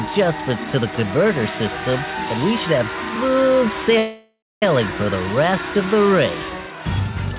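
Audio carried over a narrowband call link, with nothing above 4 kHz, as a 64 kbps G.711 A-law path would give, shows a call audio freeze from 3.98 to 4.63 s. The last sound is stretched into a fading buzz or hiss that ends in about 0.28 s of silence, likely because packets stalled and the jitter buffer ran empty. Unlike a packet-loss dropout, the sound then resumes exactly where it stopped, with nothing missing, so everything after it arrives roughly 0.64 s late.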